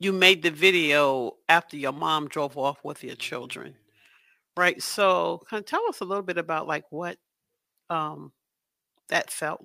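From the start to about 5.01 s the speech carries crude rate conversion. Samples were simply dropped or repeated with no filtering, which fits a 48 kHz to 44.1 kHz change, leaving a gritty, inharmonic fizz riding roughly 25 dB under the voice.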